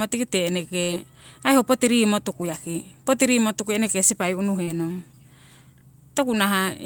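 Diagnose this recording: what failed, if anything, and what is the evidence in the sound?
A burst of packet loss at 0.83 to 1.05 s, just before "ai ho", is a network fault. The receiver extended the last sound for about 46 ms while fading it down, then resumed further on, so roughly 40 ms of speech is simply gone.

A short concealed packet loss at 4.63 to 4.70 s, right after "eneke sipai", also traces to the network. About 40 ms arrived too late, and the receiver patched it by continuing the previous sound before blending back, leaving a brief smear in the speech.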